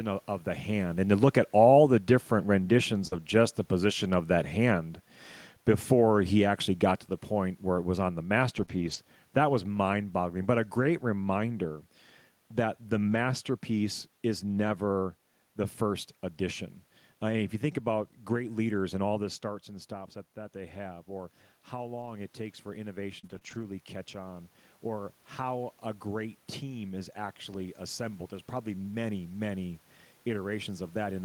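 At 3.07–3.13 s, short concealed packet loss: 40 ms never arrived, and the decoder extended the preceding sound to fill it, leaving a brief smear. Immediately after, at 3.11–3.17 s, a lost packet rebuilt from error correction covers 40 ms with a low-bitrate copy carried in the next packet, sounding rougher and noisier. The same rebuilt roughness returns at 8.57–8.63 s. A 20 ms concealed loss at 8.65–8.69 s then adds a short wobble, and a longer 140 ms stretch of error-correction frames follows at 8.69–8.95 s. Another 40 ms rebuilt section comes just after "that the" at 13.11–13.17 s. Between 22.01 and 23.65 s come scattered short gaps: about three separate late or lost packets, each up to roughly 30 ms, patched by extension and heard as small ticks and hiccups. A final 20 ms rebuilt frame at 27.53–27.55 s adds a brief grainy patch. Room noise and the talker's changes in distance are part of the recording.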